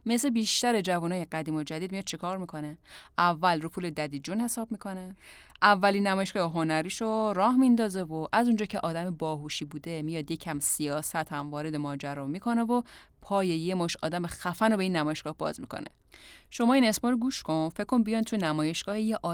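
Lost packets rebuilt from error correction occur at 6.47 to 6.57 s, then at 10.67 to 10.69 s and 15.07 to 15.09 s. Each time, the following packet carried a low-bitrate backup copy that the decoder played in place of the missing audio, so the speech runs on without a gap. The first patch lasts about 60 ms, which points to three separate lost packets; the later two last about 20 ms each. Those stretches sound briefly rougher and noisier.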